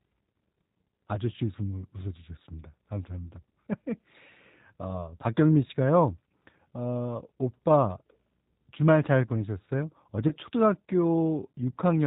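From start to finish the speech carries G.729 codec damage that is plainly audible, consistent with an 8 kbit/s encoding. Nothing above 4 kHz survives, and the voice is rebuilt from a coarse filter and sparse pulses, so it sounds rough, thin and faintly synthetic.

At 10.28 to 10.34 s there is VoIP packet loss concealed by the speech codec. About 30 ms of audio is missing, which fits a single lost packet. The decoder stretches the preceding pitch and filter into a fading buzzy tone or coloured noise, and the speech stays weak or distorted until about 10.34 s.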